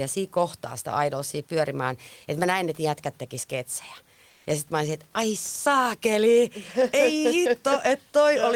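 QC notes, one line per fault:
4.31–4.43 s, comfort noise in place of the background: right after "että jätkät teki sketsejä", about 120 ms of the room noise, sitting about 38 dB below the loudest speech, gives way to a smooth, featureless hiss at about the same level. The texture of the real room noise drops out and returns when sound resumes. The likely cause is discontinuous transmission in an Opus-type codec, where the receiver synthesises shaped noise during the pause.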